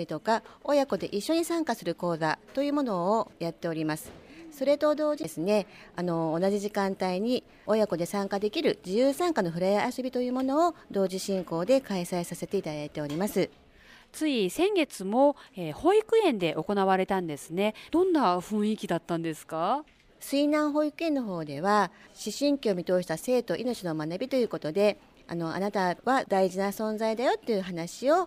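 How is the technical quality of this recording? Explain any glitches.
One glitch stands out, a CD skip at 5.23 s. The laser jumped to another turn of the disc's spiral, so the player muted for a split second, roughly 10 ms, and resumed from a different point in the track. You hear a small tick and then the audio lands somewhere else. A plain dropout would return to the same point after the gap, and a lone digital click leaves the timeline intact. Here the continuity itself breaks.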